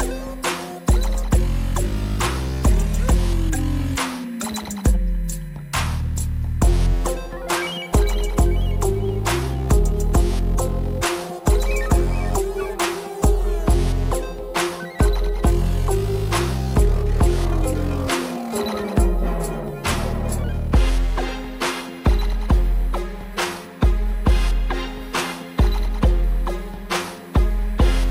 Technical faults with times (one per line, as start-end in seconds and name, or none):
0.00-28.10 USB whine